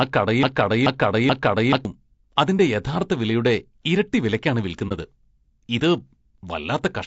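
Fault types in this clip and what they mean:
Low-delay AAC compression: Throughout the clip the speech sounds rough and grainy, with a noisy haze filling the gaps between harmonics and a thin, artificial-sounding top end. The damage is plainly audible. The likely cause is a low-delay AAC coder such as AAC-ELD at a bitrate around 32 kbps. Its short frames cannot separate closely spaced pitch harmonics well, so the limited bits leave coarse, smeared detail.
Broken-record loop: The clip opens with the loop already running. The same piece of about 430 ms plays back to back, repeating three times, until 1.85 s. Each pass is identical, so the sound stutters mechanically instead of moving forward. The likely cause is a stall in the player, encoder or stream that kept resending the last fragment it held. Whatever should have played during those seconds is gone.
AAC frame loss with muting: From 4.88 to 4.92 s the speech briefly drops out. 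It fades down and back up over a gap of about 30 ms, with soft edges. This fits a single AAC frame being lost, with the decoder filling it with silence. The overlapping transform windows on each side smooth the cut into a brief dip instead of a hard break.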